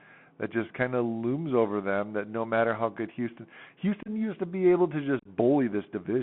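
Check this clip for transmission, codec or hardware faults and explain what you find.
Two faults are audible: the speech runs through a Bluetooth CVSD headset codec for its whole length, and it is broken twice by unconcealed Bluetooth headset packet loss.

The Bluetooth CVSD headset codec is present throughout. The speech is confined to roughly 150 Hz to 3.4 kHz, and a granular hiss sits under it. The sibilants are scratchy, which fits a 64 kbit/s one-bit delta link whose adaptive step cannot keep up with fast, loud high content. That slope-overload roughness and steady grain set it apart from a plain band-limited telephone line.

The unconcealed Bluetooth headset packet loss comes first at 4.03–4.09 s, just before "used to be able". About 30 ms of audio, a few packets' worth, drops out with abrupt edges. A second cluster at 5.19–5.27 s, just after "to be able to", loses 52.5 ms scattered over 60 ms, with the longest gap 30 ms, so it sounds chopped and crackly. 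Nothing fills these gaps, unlike concealed loss, which would smear or repeat sound across them.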